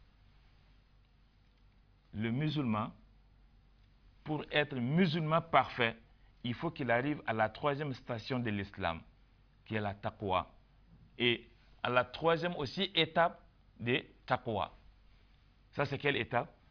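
No technical faults are audible.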